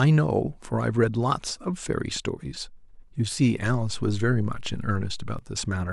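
At 3.66 s a low thump sounds beneath the speech, and another comes at 5.39 s. This is a DC step: the waveform's zero line suddenly shifts by about -32 dBFS, holds, then drops back, while the speech carries on unchanged.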